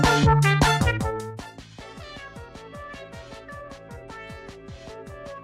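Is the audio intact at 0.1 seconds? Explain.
Yes, the audio at 0.1 seconds is intact, with no fault at that moment.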